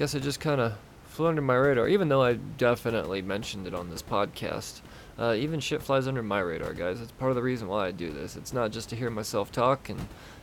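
Nothing goes wrong anywhere in this speech recording, and the only thing under it is the room's own background noise, sitting about 20 dB below the talking, which belongs to the recording rather than the system.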